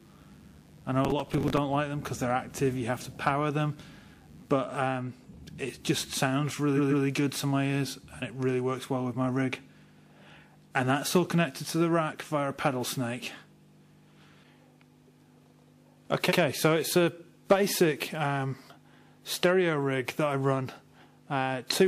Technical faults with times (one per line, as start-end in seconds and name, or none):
0.00-4.58 mains buzz
1.05-1.58 processor overload crackle
6.76-7.04 repeated frames
16.28-16.37 repeated frames